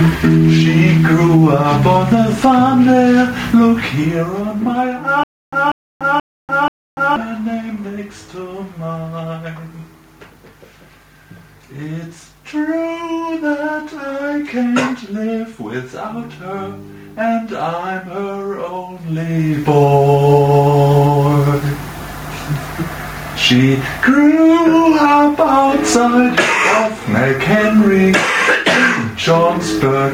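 Gain pumping runs through the whole clip. The level never settles. The swing is large, on the order of 15 dB. Loud and quiet moments sit unnaturally close together, and everything sounds squashed. The likely cause is input gain set far too high, with a fast limiter or compressor clamping down on every peak.

From 5.24 to 7.16 s there is a stutter with silent gaps. A short burst of about 192 ms plays, then cuts to dead digital silence for about 290 ms. The same burst comes back, repeating every 482 ms, four times in all. It sounds mechanical and evenly spaced. A stalled player or stream is the likely cause, replaying its last fragment on each retry and then running empty. The audio that belonged in that stretch is simply missing.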